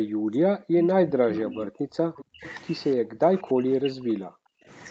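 A speech recording carrying two kinds of call fault. An echo leak shows up three times: from 1.09 to 1.72 s a delayed copy of the speech sits roughly 10 dB under the direct voice, then fainter scraps return at 2.15 to 2.25 s (around 20 dB down) and 2.44 to 2.53 s (around 25 dB down). Each copy trails its source by 298 ms, likely because a loudspeaker on the far end fed back into its microphone past an incomplete echo canceller. On a spectrogram the harmonic bands reappear as weaker, smeared ghosts shifted about 0.3 s to the right. The speech is also suppressed in double talk, briefly at 2.27 to 2.44 s and then for most of 2.96 to 4.69 s. The level falls by as much as roughly 40 dB, likely as the canceller turned the talker down along with the echo while both sides spoke. In the waveform the envelope collapses into near-flat gaps, and the spectrogram shows blank or thinned columns. The whole clip stops at 8 kHz, which is the expected top end of the call path.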